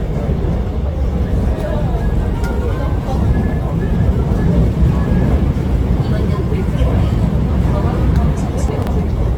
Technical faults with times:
0.00-9.38 generation loss
3.44-3.53 chunks out of order
8.68-8.87 chunks out of order

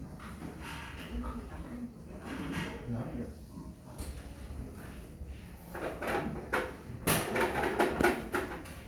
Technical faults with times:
none

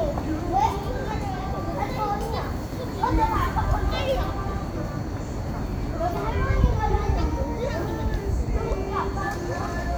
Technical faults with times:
none

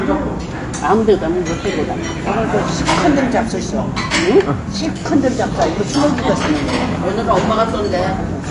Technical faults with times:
0.00-8.51 AAC compression

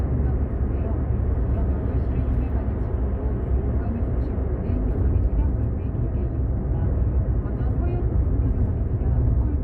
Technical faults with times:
none

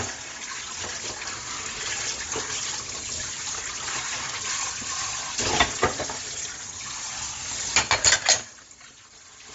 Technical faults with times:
0.00-9.54 Bluetooth LC3 compression

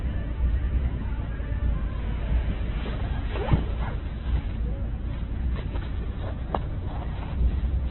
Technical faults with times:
0.00-7.90 Opus compression

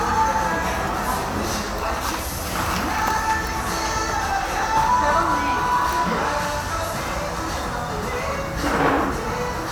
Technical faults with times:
none

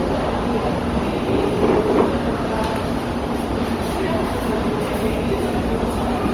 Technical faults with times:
0.00-6.33 generation loss

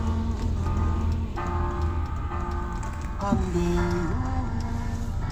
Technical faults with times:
0.00-2.80 doubled audio track

